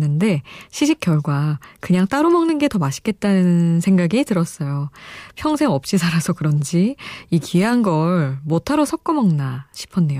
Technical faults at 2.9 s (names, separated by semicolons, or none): none